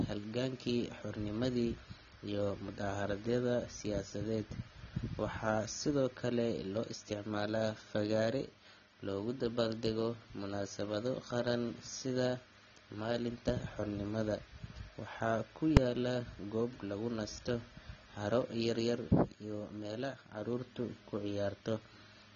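Speech runs through the whole clip with a dull, smeared quality and a warbling, fizzy edge on sibilants. Nothing is present above 7.5 kHz. The likely cause is AAC compression (AAC-LC) at a low bitrate, somewhere around 24 kbps. What separates it from a simple low-pass filter is the texture below the cut-off. Bands thin out and shimmer with substitute noise instead of staying clean, so the damage is plainly audible across the clip and not just a loss of top end. At 15.77 s there is a single hard bang where invalid numbers hit full scale. The output is pinned at one extreme value for about 2.7 ms, which fits a 128-sample block. This is different from ordinary clipping, which flattens loud peaks of real sound. Here the sound is replaced outright by a full-scale value, and the block is too short to hear as a separate start pop and end pop.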